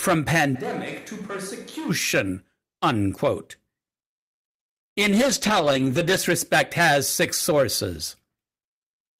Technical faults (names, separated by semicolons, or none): switch to a distant microphone; call bitrate drop